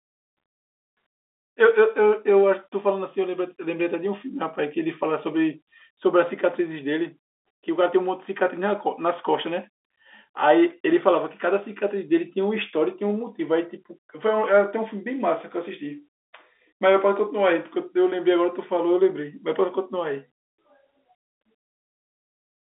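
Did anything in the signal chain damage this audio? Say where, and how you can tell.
No, the chain leaves this speech intact; it sits within a G.711 telephone band of roughly 300 Hz to 3.6 kHz with nothing above 3.8 kHz, which fits a 64 kbps mu-law line, and the coding noise under it is faint at most.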